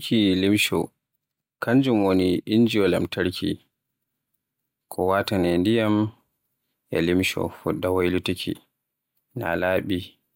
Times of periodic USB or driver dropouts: none

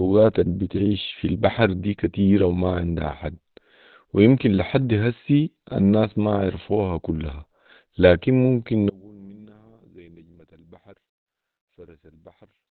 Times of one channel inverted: 8.90-12.76

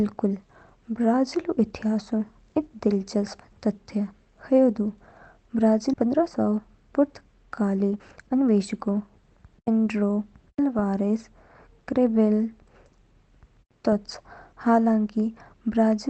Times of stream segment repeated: none

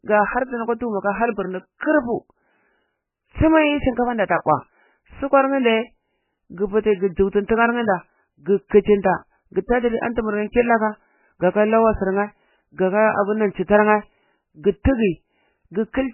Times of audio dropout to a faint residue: none

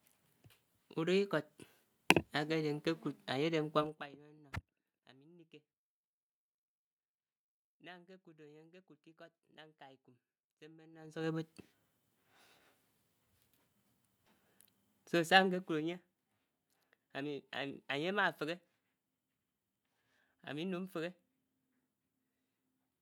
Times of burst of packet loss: none

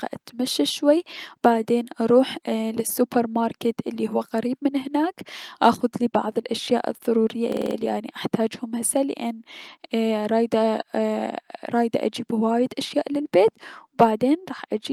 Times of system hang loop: 7.52-7.76

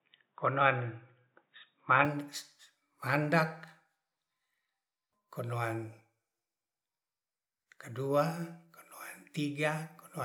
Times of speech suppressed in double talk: none

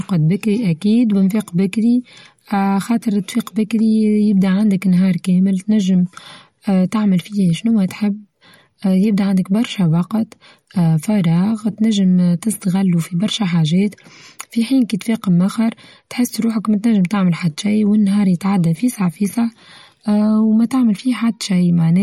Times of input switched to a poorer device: none

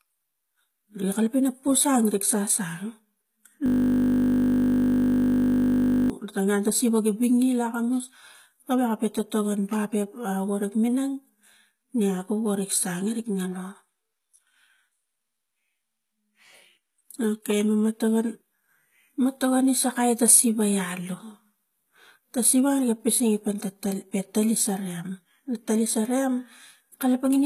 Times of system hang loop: 3.66-6.10

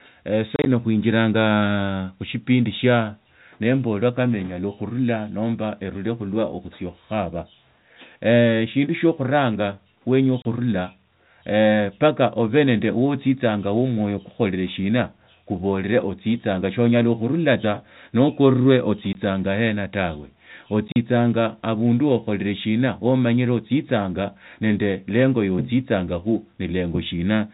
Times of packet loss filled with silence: 0.56-0.66, 10.42-10.45, 19.13, 20.88-20.96

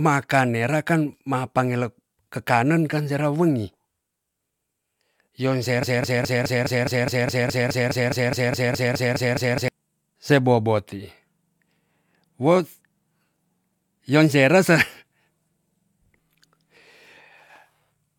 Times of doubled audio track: none

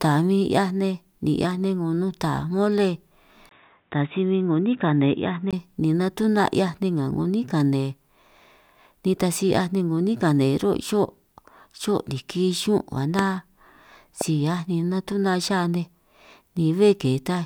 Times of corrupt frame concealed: none

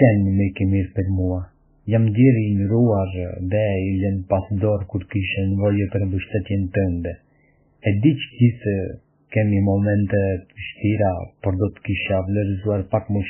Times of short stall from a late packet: none

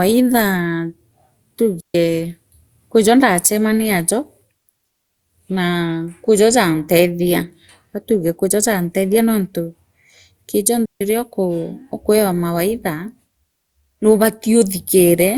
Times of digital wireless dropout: 1.80-1.95, 10.85-11.01

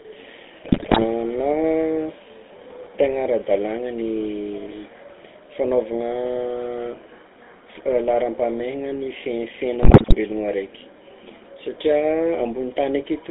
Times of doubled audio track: none

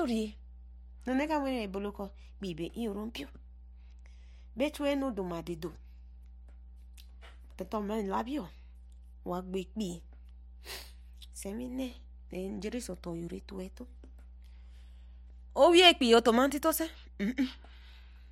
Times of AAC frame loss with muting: none

